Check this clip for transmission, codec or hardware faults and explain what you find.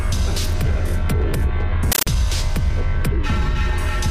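One fault is present. From 1.92 to 2.07 s the sound is replaced by very loud, chattering static that rattles at about 31 bursts per second, each burst roughly 13.3 ms long. This is a compressed stream played as audio. A Dolby Digital (AC-3) bitstream on the digital link, which fits a 640 kbps stream, was treated as ordinary samples instead of being decoded, so each coded frame plays as a noise burst followed by silent padding.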